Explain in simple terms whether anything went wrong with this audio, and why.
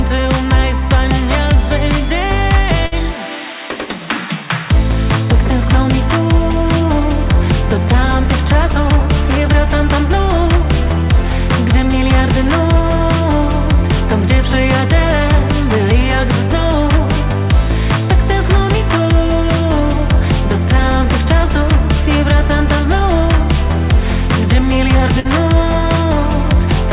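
Yes, twice the call dropped a short burst of packets. This burst of packet loss hit at 2.86 to 2.94 s and 25.20 to 25.27 s. Each time, the receiver stretched the last sound into a fading buzz or hiss, then jumped ahead, skipping a sliver of audio.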